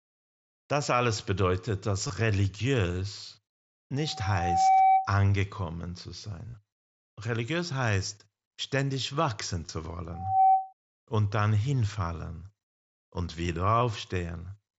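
Speech recorded through a Bluetooth headset on the wideband mSBC codec, which limits the band to about 8 kHz, carries two kinds of fault. Concealed Bluetooth headset packet loss occurs at 2.07–2.10 s just after "alles bedeutet", at 6.49–6.54 s, at 9.66–9.69 s after "heißt ständig wachsen", and at 13.8 s. Lost stretches of roughly 15 to 45 ms are patched by repeating a recent slice of waveform, leaving brief buzzy holds, longest at 6.49 s. Loudspeaker feedback squeal appears at 3.97–5.15 s and 10.13–10.73 s, the second between "heißt ständig wachsen zu" and "und dann hinfallen". A 765 Hz tone swells over roughly 0.7 s and 0.3 s respectively to about 10 dB above the speech, as the microphone re-amplifies the speaker output around the loop.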